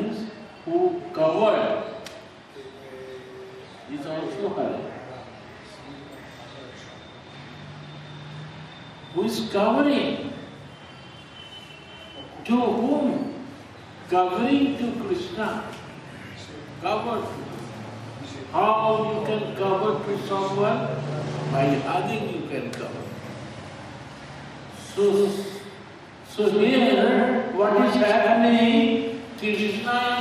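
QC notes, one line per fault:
23.24 s to end: doubled audio track. A second full-band copy of the sound enters abruptly and runs behind the original to the end of the clip. It trails by roughly 150 ms and sits about 5 dB lower. The copy carries no decay or room colour, so it reads as a hard slapback rather than an echo. The likely cause is the same audio being picked up again through a slower path and mixed in.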